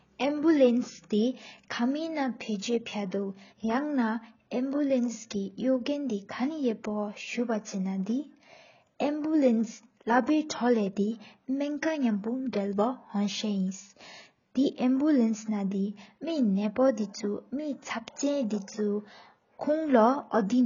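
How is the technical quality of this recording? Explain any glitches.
Poor, because of one fault throughout. The speech sounds dull and smeared from start to finish, with nothing above 7.1 kHz and a warbling, fizzy texture on sustained sounds and sibilants. This likely comes from heavy AAC compression (AAC-LC), and the damage fits a bitrate of about 16 kbps. At that rate the encoder cuts off the top band and quantises the remaining frequency lines coarsely, leaving spectral holes or substitute noise.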